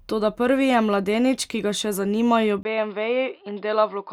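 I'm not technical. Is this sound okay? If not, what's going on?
No. At 2.63 s, right after "ki ga še zanimajo", the speech turns duller and slightly quieter, with a very brief gap of about 20 ms at the change and a faint new background noise. Everything above roughly 5 kHz is gone from there to the end. This is an input switched to a poorer device: the recording most likely jumped to a different, lower-quality microphone or headset, which carries a narrower range of sound.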